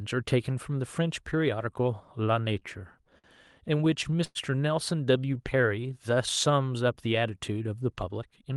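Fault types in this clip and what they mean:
Repeated stalls (stutter): Packets were arriving late, so the jitter buffer kept running dry, and each time the receiver stretched out the last bit of sound until fresh audio showed up. You get two choppy patches, 2.59 to 3.27 s with five little hitches (the longest 55 ms) and 3.78 to 4.38 s with six, the longest about 104 ms, where roughly a quarter of that stretch is filler. Nothing actually goes missing; the speech just drags and stutters.
Jitter buffer slow-down: Here the buffer was getting low or had just raised its target delay, so the receiver rebuilt its reserve by repeating single pitch periods and slivers of pauses over and over. From 5.12 to 6.15 s the speech runs at about 90% speed with the pitch unchanged. It picks up 106 ms of extra length, which comes across as drawn-out, stretched sounds rather than any break in the audio.
Jitter buffer speed-up: This is the opposite case. 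The buffer had more audio queued than it wanted, so the receiver trimmed tiny pieces, one or a few pitch periods at a time, to bring the delay back down. From 8.09 s to the end the speech runs at about 114% speed with the pitch held steady. Around 70 ms gets shaved off, enough to make that closing bit sound hurried.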